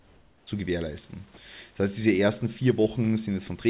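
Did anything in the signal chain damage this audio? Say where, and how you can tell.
Yes. Until 0.47 s the background is a smoother, steadier hiss about 4 dB quieter than the room noise that follows. This is comfort noise in place of the background, likely from discontinuous transmission in call processing: the sender went quiet and the receiver synthesised shaped noise.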